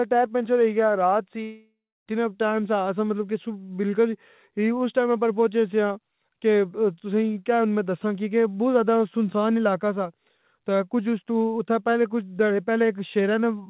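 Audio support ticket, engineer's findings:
Long network dropout, likely cause, 1.43–2.09 s: after "پنچر ہوئی یا رات" the last sound smears into a fading buzz, then about 0.29 s of near-silence; audio resumes at "ٹیم سا اساں مطلب". Roughly 0.63 s of signal is never played. Receiver concealment stretched the final frames until giving up. Unlike a stall, playback does not resume where it stopped: the lost section is skipped. Band limit at 4 kHz is consistent with G.711 mu-law on the call path.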